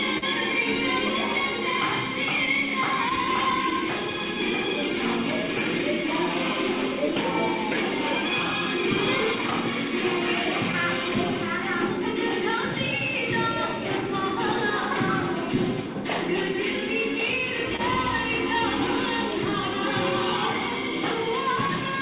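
Throughout the clip there is clock drift between sender and receiver. The sending clock runs slow by roughly one and a half percent, so the receiver's buffer keeps drifting toward empty. The result is recurring small timing hiccups at uneven intervals. It is a steady background instability, not isolated damage.

From 0.18 to 3.73 s come scattered short gaps: about four brief holes, the longest a few tens of milliseconds. Each was patched by extending the preceding sound, leaving brief ticks or smears. Unlike the timing fault, these gaps do not themselves change the tempo.

From 4.11 to 21.16 s the receiver makes repeated timing corrections, playing at about 99% speed and repeating short pieces to stay in step with the slow sender. Together they add roughly a fifth of a second. They are heard as a faintly dragging, uneven pace, all in the same stretching direction, rather than as clicks.

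Between 7.74 and 13.55 s, more scattered short gaps appear: about four very brief concealed holes, each only around 10 ms or less. These are quick isolated blips laid over the slower pacing drift.

From 16.53 to 21.71 s another four or so scattered short gaps occur, the longest a few tens of milliseconds. They sound as small smears where the last sound was stretched across a lost packet. They stand apart from the corrections because they are local dropouts, not a tempo change. Through the narrowband G.711 call path, nothing is heard above 4 kHz.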